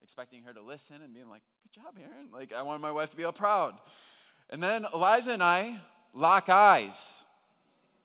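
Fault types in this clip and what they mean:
Automatic gain rising: the automatic gain control judged the incoming level too low and raised its gain slowly, twice: by about 7 dB from 0.52 to 3.78 s, then by about 6 dB from 4.49 to 6.97 s. Because the boost applies to the whole signal, the voice and the background noise swell together, over roughly 3.3 seconds the first time and 2.5 seconds the second. It sounds like the room itself creeping louder rather than the talker raising their voice.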